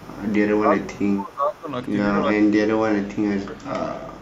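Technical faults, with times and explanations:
0.00–0.33 s, echo leak: A faint delayed copy of the speech trails the talker by 344 ms, about 25 dB below the main level. The likely cause is a far end on loudspeaker whose echo canceller let part of its microphone pickup through and sent it back.
0.61–1.68 s, speech suppressed in double talk: The talker's level sinks by as much as about 20 dB, in pieces adding up to roughly a second. This is likely an echo canceller that heard both sides at once, could not separate local speech from loudspeaker echo, and attenuated both.
2.21–3.95 s, speech suppressed in double talk: A longer and deeper episode, with the speech pushed down by up to about 25 dB over roughly one and a half seconds in total.
4.01–4.21 s, echo leak: The same 344 ms delayed copy returns at the end, weaker at about 30 dB below the speech. Its fixed delay matches the opening, which points to the same incompletely cancelled loudspeaker path.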